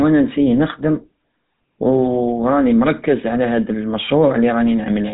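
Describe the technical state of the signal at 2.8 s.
At 2.8 s the speech carries GSM full-rate codec damage, as throughout the clip: pulse-driven vocal-tract modelling gives a buzzy roughness, and a spectrogram shows a hard ceiling near 3.8 kHz.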